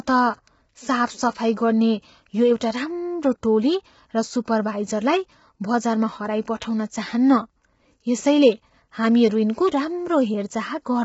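It's a speech clip, and the whole thing sounds rough and grainy, with noise between the harmonics and nothing above 7.7 kHz, likely low-delay AAC compression squeezed to a low bitrate.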